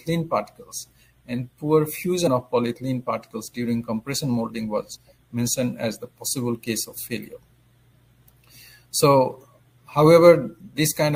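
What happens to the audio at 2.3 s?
At 2.26 s, damaged data in the compressed stream makes the decoder misread a frame and resync, giving a brief chirp, squawk, click or short hole.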